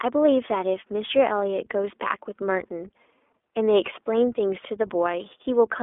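Throughout the recording, the speech has passed through the iLBC codec, which squeezes the signal into a narrow telephone band and rebuilds each short frame's excitation without drawing on the previous one. The band runs from about 300 Hz to 3.5 kHz, so the lows and everything above are gone, and the independent frame coding, consistent with 20 ms frames at 15.2 kbps, leaves a plainly audible rough, buzzy, slightly synthetic texture on every syllable.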